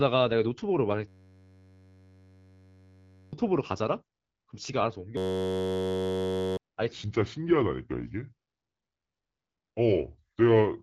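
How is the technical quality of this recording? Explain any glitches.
The recording has three clear glitches: two system hang loops and a final stretch of speech at the wrong speed.

System hang loop, 1.08 to 3.33 s and 5.17 to 6.57 s: the playback system froze while the hardware kept replaying one 10.67 ms buffer, which fits a 512-sample buffer. That repetition at 93.8 Hz forms a steady buzz, and about two seconds, then one and a half, of speech are lost.

Section at the wrong speed, 6.92 s to the end: the speech plays at 0.763 times its proper rate, likely from a clock mismatch in editing or playback. The voice turns deep and slow, dropping around five semitones.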